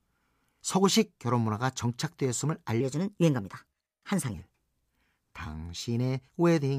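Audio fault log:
2.81–4.34 s, section at the wrong speed: the speech runs about 1.19 times too fast, rising roughly three semitones and hurrying at once, likely from playback against the wrong clock. Because pitch and tempo move together, this is a speed error, not a pitch shift.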